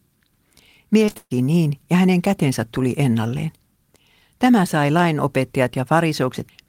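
Repeated packet loss (robotic sound) runs from 1.05 to 1.32 s, just before "niin ja hänen kätensä": five gaps, the longest 129 ms, patched by extending prior sound, leaving choppy speech with pieces missing.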